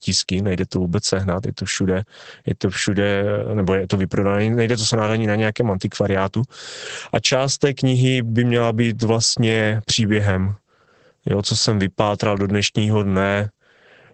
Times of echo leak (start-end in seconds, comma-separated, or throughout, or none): none